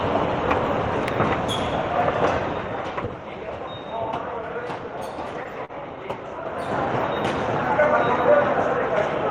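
At 5.65 s to 5.72 s there is a short stall from a late packet: the jitter buffer ran dry, so the receiver stretched the last stretch of sound for about 40 ms, then resumed exactly where it left off, nothing lost but everything after shifted 40 ms later. It sounds like a brief held smear with a slight buzz or dip. A spectrogram shows frozen, smeared horizontal bands, and the waveform shows a repeating, flattened segment.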